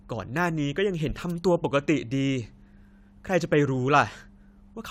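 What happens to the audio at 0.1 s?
Nothing goes wrong at 0.1 s; the audio is intact at that moment.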